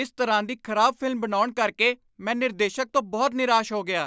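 Nothing stood out on listening to this speech recording.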